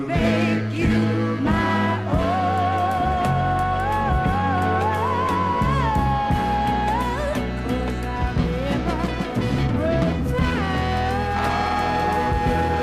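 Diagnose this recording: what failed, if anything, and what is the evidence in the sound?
From about 8.16 s to the end, the sound takes on a rough, metallic edge that is strongest on its brighter, higher-frequency content and drops away in quiet passages. That points to periodic clock jitter at the converter stage: interference is modulating the sampling clock at a fixed rate of around 1 kHz, so every component of the signal picks up sidebands spaced roughly that far above and below it, with the higher frequencies hit hardest.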